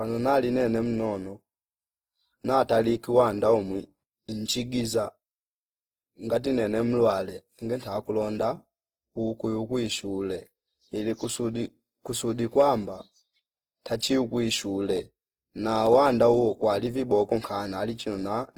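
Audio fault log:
throughout Opus compression: speech sounds plainly grainy and rough yet keeps full bandwidth to 20.4 kHz, likely Opus music mode near 16 kbps filling starved bands with noise.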